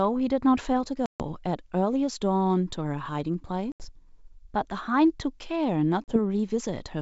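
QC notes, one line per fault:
1.06–1.23 s, 3.72–3.88 s, 6.04–6.19 s: packet loss on an ADPCM call. Packets dropped, leaving hard-edged silences of 140, 80 and 40 ms. The decoder's predictor and step size then lag the sender's, so the speech returns with brief distortion before settling.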